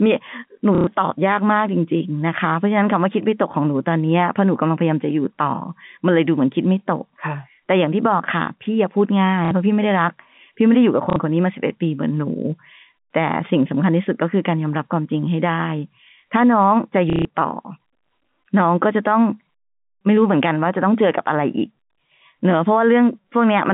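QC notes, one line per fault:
0.75–0.87 s, 9.45–9.51 s, 11.1–11.16 s and 17.1–17.25 s, packet loss with last packet repeated: dropouts of 120, 60, 60 and 150 ms where the receiver loops the previous chunk until audio resumes. The joins don't land on the pitch cycle, and the loops buzz at roughly 33 Hz, which fits 30 ms packets. You get a quick robotic stutter, heard through the narrow 150 Hz to 3.6 kHz telephone band.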